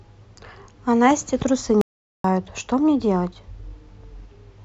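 At 1.81 s the speech cuts out dead and doesn't come back until 2.24 s, so you lose about 430 ms. That's an audio dropout to silence: the gap is pure silence, with no room tone or hiss underneath, and whatever was said in that stretch is simply gone. The likely cause is the input dropping away for a moment, from a loose connection, a link hiccup or an accidental mute, while recording carried on writing silence.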